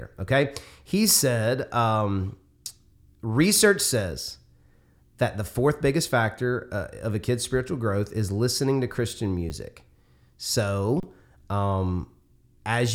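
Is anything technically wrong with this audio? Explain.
Yes. Underrun with held sample at 9.49 s and 11.00 to 11.03 s: the output buffer ran dry and the converter held its last value, freezing the sound briefly. Some audio was lost in each gap.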